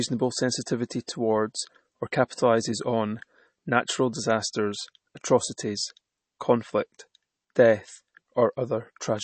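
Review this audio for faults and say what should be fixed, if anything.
Throughout the speech, nothing is heard above 8.3 kHz, and the upper range has a watery, swirling quality that is plainly audible. This is likely MP3 compression, and it fits a starved bitrate around 32 kbps. A plain low-pass filter would also remove the treble, but here what remains flickers as weak frequency lines drop in and out from frame to frame. To prevent it, encode at a higher bitrate or keep a lossless master.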